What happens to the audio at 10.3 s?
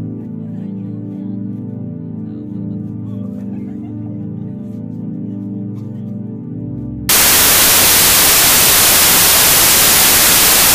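At 10.3 s you're inside a wrong sample width fault that runs from about 7.09 s to the end of the clip. The data were written as packed 24-bit integers but are being read back as 32-bit, so each value is assembled from bytes of neighbouring samples. That leaves loud, harsh noise with the original sound buried underneath, playing about 1.33 times too fast and correspondingly higher in pitch.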